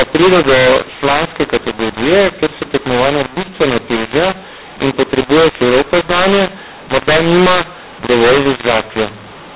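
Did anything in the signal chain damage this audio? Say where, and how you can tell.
Yes. At the codec stage, G.711 mu-law data is decoded as A-law, a mu-law and A-law mix-up. The speech is harsh and distorted throughout, with levels misplaced and the quietest samples lifted above silence, so pauses hiss. The band still stops at 4 kHz.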